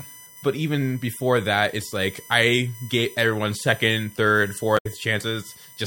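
A USB whine runs through the whole speech clip. It sits on a 1 kHz pitch, strongest at its 16 kHz harmonic, roughly 20 dB below the speech. USB frame current leaks through power or ground.

From 4.74 to 4.86 s, damaged data in the compressed stream breaks through as a brief glitch. The decoder misreads corrupted frames and loses sync.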